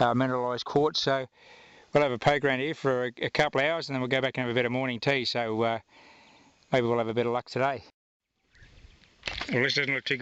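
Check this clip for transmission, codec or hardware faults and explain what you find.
No transmission, codec or hardware faults can be heard anywhere in this clip.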